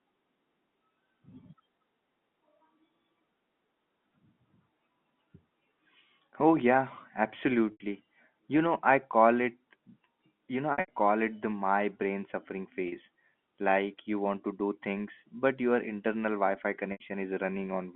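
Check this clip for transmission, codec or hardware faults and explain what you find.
Four dropouts of the same kind occur, heard over a telephone-band line whose G.711 mu-law coding passes roughly 150 Hz to 3.6 kHz with at most faint coding noise.

Packet loss with pitch repetition occurs at 7.72–7.80 s, 10.72–10.88 s (just before "it the my brain"), 12.88–12.92 s (just after "the my brain suffering"), and 16.92–17.00 s. Packets went missing, and the receiver filled each gap by looping the last pitch cycle it had, tapering it away. The 40 ms gap sounds like a brief held buzz. The 80 ms gaps fade into silence, and speech returns with a short cross-fade. At 10.72 s, 140 ms of loss is scattered over 160 ms, with runs up to 80 ms, before the sound resumes.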